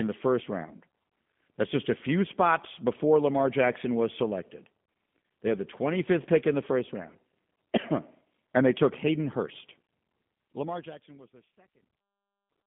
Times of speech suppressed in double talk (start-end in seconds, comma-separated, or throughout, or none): none